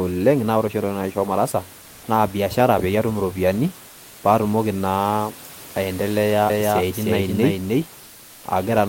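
From 1.81 to 2.03 s and again from 3.89 to 4.23 s, the room hiss, which sits about 24 dB below the speech, flattens into a steady, featureless wash about 1 dB quieter. This is comfort noise in place of the background: the sender likely stopped transmitting during the pauses (Opus DTX), and the receiver synthesised filler noise.

From 6.50 to 7.86 s, a second, equally loud copy of the speech trails about a third of a second behind, with no room colour, and it appears and vanishes abruptly. This doubled audio track is likely the same signal mixed in twice along a slower path.

The comfort noise returns from 8.03 to 8.43 s, again a smooth, slightly quieter hiss replacing the real background.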